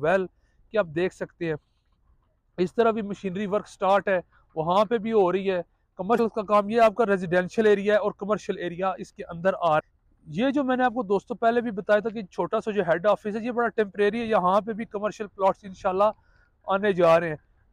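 At 6.15 to 6.20 s and again at 9.76 to 9.81 s, the audio breaks into a brief glitch of about 45 ms, the sound of damaged data in a compressed stream. In each spot, corrupted bytes reach the decoder, which misreads the frames there, loses sync and has to find the next valid frame header before clean output resumes. The brief glitch in both places is that misdecoded stretch.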